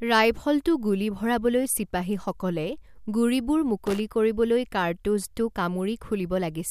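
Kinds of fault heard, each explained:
Loose connector crackle: from 3.86 to 4.00 s, right after "গুলী ভৰাবলৈ চিপাহীসকলে গুড়িবোৰ", an unsteady contact rapidly cuts in and out, chopping the speech into a brief irregular scratchy burst.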